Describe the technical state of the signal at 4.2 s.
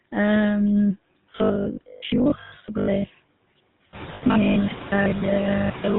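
At 4.2 s the GSM full-rate codec's decoder is covering lost GSM frames, a gap of about 80 ms from 4.14 to 4.23 s. It repeats the last good frame's settings, so the sound hangs as a brief rough, metallic ring instead of moving on.

Underneath, robotic sound from repeated short buffers runs from 1.2 s to the end. It is likely caused by audio arriving too seldom, so the software replays the last 20 ms and skips roughly half the real signal. That imposes a fixed 50 Hz buzz, rigid and metallic, that only loosely tracks the speech.

The codec itself shapes everything here. The sound points to a 13 kbps GSM full-rate stream that models the vocal tract and excites it with sparse regular pulses. The result is a plainly audible buzzy, gravelly roughness with nothing above 4 kHz.

Noise suppressor artifacts are also present. The suppressor cuts what it judges to be steady noise by about 17 dB, band by band and frame by frame. 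The room noise, which rose by about 13 dB around 4.0 s, is pumped down and back up.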